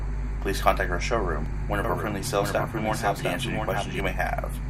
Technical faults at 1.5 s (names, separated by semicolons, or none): repeated buffer